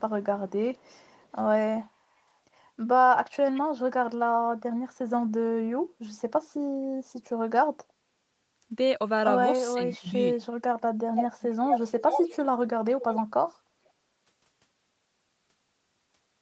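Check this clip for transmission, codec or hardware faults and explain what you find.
Two kinds of fault can be heard: echo leak in six places, and speech suppressed in double talk once.

Echo leak occurs at 0.74–1.39, 3.56–3.61, 11.16–11.24, 11.41–12.39, 13.01–13.22 and 13.85–13.90 s. A delayed copy of the speech trails the talker by 464 ms. It is barely audible at the start and near 13.9 s, but around 11.2–12.4 s it is roughly as loud as the talker. The likely cause is a far-end loudspeaker whose echo canceller let part of the returning signal through and sent it back.

Speech suppressed in double talk occurs between 9.74 and 10.45 s. The talker's level drops by up to about 20 dB in pieces that add up to roughly half a second, so parts of the speech sink or vanish. This likely happened because both sides spoke at once. The echo canceller could not separate the local talker from the loudspeaker echo, so it turned everything down.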